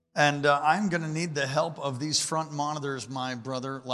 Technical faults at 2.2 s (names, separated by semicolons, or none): none